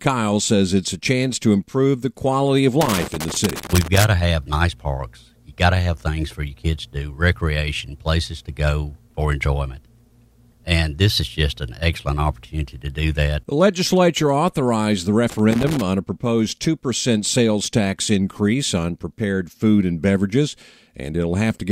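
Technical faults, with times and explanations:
2.81 to 4.04 s and 15.30 to 15.82 s, loose connector crackle: after "improve the quality of" and again after "legislature authorized the", the audio breaks into irregular scratching as a worn or dirty contact makes and breaks repeatedly, chopping the signal and popping wherever DC sits on the line. The first burst lasts about 1.2 s and the second about 0.5 s. Unlike digital dropouts or steady clipping distortion, the bursts have no regular spacing and sound rough and scratchy.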